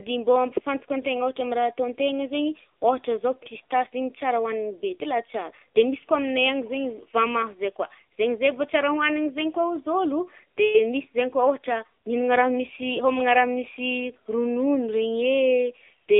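From start to finish the speech carries AMR narrowband mobile codec damage: nothing passes above 3.7 kHz or below 300 Hz, and the low-bitrate vocal-tract model leaves a plainly buzzy, synthetic texture, which fits roughly 7.4 kbps AMR-NB. A simple telephone band filter alone would sound muffled but not buzzy or synthetic.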